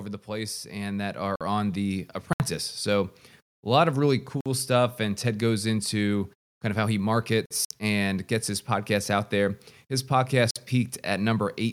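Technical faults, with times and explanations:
0.27 to 2.16 s, automatic gain rising: the level of the speech and the background behind it climbs together by about 8 dB over roughly two seconds, a slow swell rather than a step. The automatic gain control judged the opening input too quiet and raised its gain gradually, so everything it passes, wanted or not, comes up in level at the same rate.
1.36, 4.41, 7.46 and 10.51 s, gap between chunks: four short holes of 50 ms each, with abrupt edges and a steady 3.0 s spacing. One comes right after "a lot of really", and another after "kind of how he". The audio was handled in 3-second chunks, and silence was left at each join, so nothing is lost but the flow is broken at every boundary.
2.33 and 7.65 s, Bluetooth stall: the sound drops briefly to silence, for 68 ms and then 57 ms, and resumes. The second dropout falls just ahead of "and gets his podcast". 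The likely cause is interference delaying packets to Bluetooth headphones. Their buffer ran empty, so playback halted until the resent data arrived. The irregular timing separates these from the evenly spaced chunk gaps.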